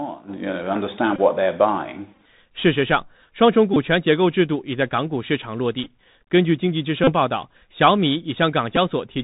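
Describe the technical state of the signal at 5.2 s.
At 5.2 s the speech sounds dull and boxed in, with nothing above 4 kHz, scratchy s sounds, grainy hiss beneath, and loud bright moments breaking up. This is the Bluetooth CVSD headset codec, present throughout, which fits a 64 kbps stream. It codes each sample as a single up-or-down bit with an adapting step, and that step can't keep pace with sharp high-frequency energy.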